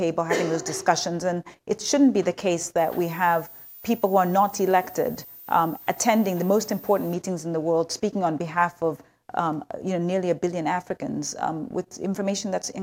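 Right from the start and all the way through, there's sample clock jitter: the converter's timing wobbles by something like a microsecond and a half, so each sample lands a touch early or late. Because that timing error turns into amplitude error wherever the waveform is moving fast, you get a roughness, a grainy hiss, sitting roughly 35 dB under the sound. It's strongest on loud and bright passages and drops away when things go quiet.

Then from 2.78 s to 7.14 s a switching supply whistle comes in, a high tone wandering between about 14.5 kHz and 14.8 kHz, around 20 dB below the sound. That's a power supply switching in the audible range, either running in burst mode or beating against another supply, and the small pitch movement follows its changing load.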